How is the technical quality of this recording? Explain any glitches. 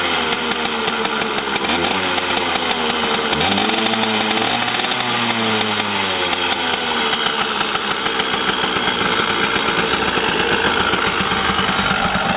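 No technical glitches can be heard anywhere in the recording. The audio runs without any interruption or disturbance that would need explaining.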